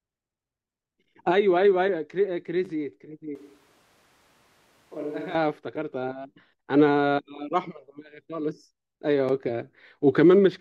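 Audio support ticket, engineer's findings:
Speech goes roomy and hollow 3.35 to 5.35 s, thinner low end, level drops about 10 dB, room noise more audible, abrupt in and out. Likely a switch to a distant microphone, close mic dropped, farther pickup filling in.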